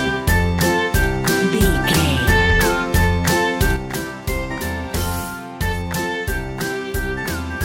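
A sudden gain jump at 3.77 s drops the sound and its background noise together by about 6 dB, and the level stays there to the end; the waveform envelope steps down abruptly, and the spectrogram darkens evenly across frequencies, likely from a gain change applied without a ramp.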